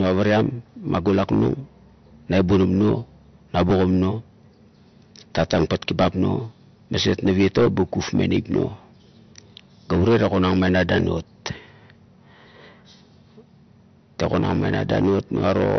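Throughout the speech, nothing survives above 6.1 kHz, and there's a watery, swirly texture, likely MP3 compression at a low bitrate around 48 kbps.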